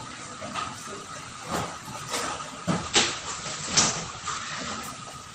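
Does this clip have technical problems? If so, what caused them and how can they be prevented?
Yes. A call bitrate drop runs from 2.84 to 4.89 s. The audio turns coarse and muffled, with highs cut to 8 kHz. This fits the encoder falling to about 11 kbps. Prevent it with a steadier network and a higher minimum bitrate.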